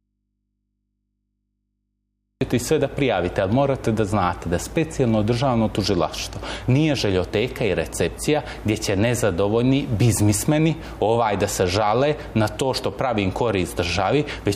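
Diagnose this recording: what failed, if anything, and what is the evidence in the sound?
An audio dropout to a faint residue is already under way at the start and lasts until 2.41 s. Only mains hum remains, roughly 55 dB down, before the signal returns abruptly. A spectrogram shows thin hum lines; the waveform is near-flat. Likely cause: an interrupted analogue connection leaving an open input.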